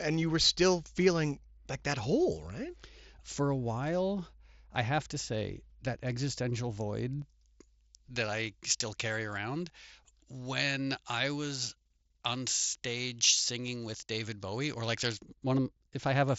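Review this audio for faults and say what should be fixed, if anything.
Pre-emphasis left on from 7.22 to 15.22 s: treble lift consistent with a J.17 curve, about 11 dB at 10 kHz re 1 kHz, makes the speech thin and sibilant up to the headset band's 7.7 kHz limit. Apply the matching de-emphasis wherever pre-emphasis is used, and check the chain's emphasis flags end to end.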